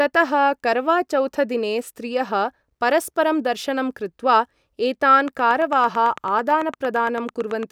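From 5.28 to 7.64 s, a regular ticking of about 9 clicks per second pokes roughly 5 dB above the speech: a train of clicks, likely from electrical interference.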